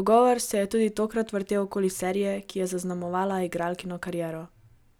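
No technical faults can be heard in this speech recording. There is nothing to place in time or describe.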